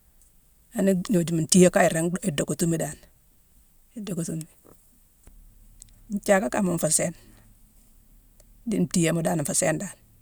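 No technical faults can be heard anywhere in this recording of speech, and the signal stays steady and continuous throughout.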